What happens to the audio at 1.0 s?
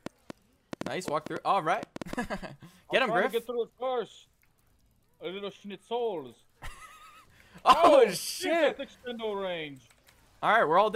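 At 1.0 s the audio sits inside a train of clicks running from 0.06 s to 2.14 s. About ten sharp pulses arrive at roughly 5.3 per second, unevenly spaced. Each has much the same shape and peaks around 10 dB above the surrounding sound. They are heard as irregular ticking or popping laid over the audio, including in quiet gaps. The likely cause is interference from nearby equipment or a faulty connection or power supply.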